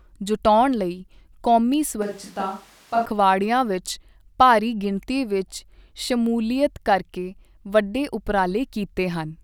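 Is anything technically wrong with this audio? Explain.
Yes. From 2.02 to 3.06 s the speech turns roomy and hollow, loses low end, drops roughly 5 dB, and carries more background noise, around 25 dB below the speech. The abrupt change in and out is likely a switch to a distant microphone while the close one's signal was missing.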